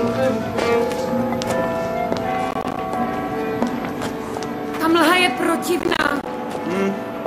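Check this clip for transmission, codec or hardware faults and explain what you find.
Two bursts of processor overload crackle appear, at 2.51 to 2.78 s and 5.79 to 6.27 s. Gritty tearing rides on the sound as the processor misses buffer deadlines, leaving rapid silent gaps that fit buffers of roughly 10 ms.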